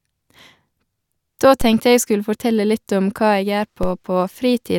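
At 1.61 s there's a DC step: the waveform's zero line suddenly jumps to a new offset, and you hear it as a low thump under the speech. The speech itself carries on untouched. The offset then drains away the way a 5 Hz high-pass would pull it back, fading out within a few tens of milliseconds. The same thing happens again at 3.83 s, with the same brief thud and the same quick decay back to centre.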